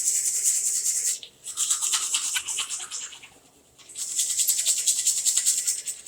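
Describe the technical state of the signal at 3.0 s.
At 3.0 s the sound is intact, with no dropout, click, distortion or other fault at that moment.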